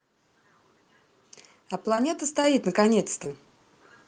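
Around 1.95 to 1.99 s there's a short concealed packet loss: about 20 ms of the call didn't reach the decoder in time, and the receiver papered over it by extending the preceding sound for roughly 18 ms before blending back into the real audio. You hear it as a quick smear or wobble. The same thing happens again at 3.24 to 3.29 s, another 20 ms gap, this time covered by only about 10 ms of continued sound, and the stretch also runs a touch longer than it should. Both are tiny.

At 2.44 s the microphone volume is stepped up. The call software decided the input was too quiet and bumped the device's input level in a single jump of 5 dB. The voice and the background noise come up together at that instant, so it's an abrupt rise in overall loudness rather than a gradual swell.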